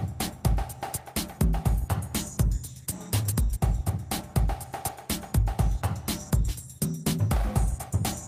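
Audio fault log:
No faults heard anywhere in this recording.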